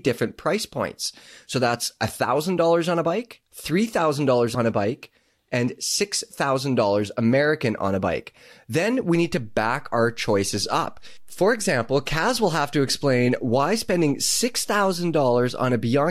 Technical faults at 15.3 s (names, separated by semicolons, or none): DC step